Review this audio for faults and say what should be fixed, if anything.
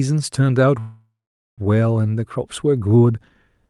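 There's a call audio freeze from 0.79 to 1.61 s: the last sound stretches into a fading buzz, then about 470 ms of silence before the speech resumes right where it stopped, now roughly 0.78 s late. Nothing's lost. It's likely packets stalled and the jitter buffer ran dry. The Opus path underneath, band-limited to 12 kHz, carries on fine. To prevent it, give the jitter buffer more headroom and check the network route for stalls.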